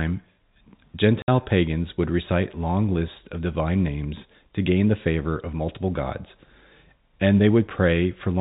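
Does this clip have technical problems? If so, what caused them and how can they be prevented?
Yes. At 1.22 s the speech drops out abruptly for about 60 ms, a hard gap where the sound cuts off and restarts. This is packet loss filled with silence: packets never reached the receiver, and it played silence in their place rather than covering the hole. The 60 ms length fits three consecutive lost 20 ms packets, as is typical of the G.711 telephone coding carrying this call. Enabling packet loss concealment and a jitter buffer with forward error correction would prevent this.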